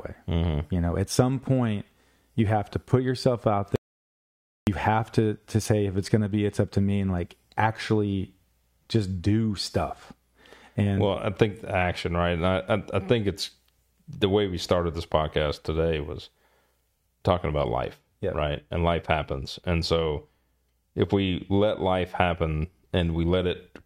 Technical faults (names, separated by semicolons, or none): audio dropout to silence